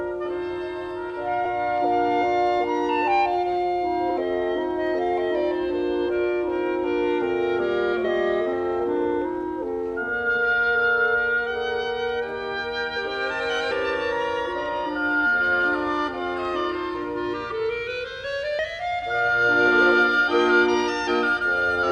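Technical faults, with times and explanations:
1.44–1.46 s, 8.04 s, 13.70 s and 18.58 s: damaged data in a compressed stream. Corrupt frames throw the decoder out of sync, giving brief glitches heard as a chirp, squawk, click or short hole, which show as narrow broadband vertical streaks and waveform glitches.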